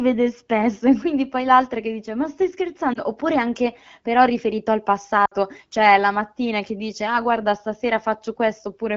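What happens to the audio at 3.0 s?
A lost AMR speech frame hits at about 2.93 to 2.99 s, just after "che dice ma stai" and before "oppure anche però riferito". A radio error corrupted the frame's checksum, so the wideband decoder covered the gap by repeating the last good pitch and vocal-tract settings at reduced gain. The brief dip or warble lasts only about 20 ms, which fits a single missing frame, and the speech recovers weak or rough for an instant afterwards.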